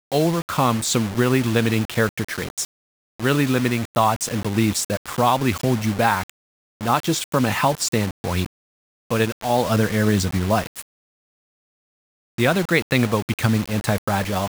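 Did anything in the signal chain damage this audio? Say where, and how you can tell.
Yes. Grainy distortion rides on the speech throughout and changes with it. Quiet passages turn gritty and the faintest sounds sputter or drop out. The likely cause is low bit depth without dither at sample-format conversion: 5 bits, rounded, leaving error only about 15 dB below the signal.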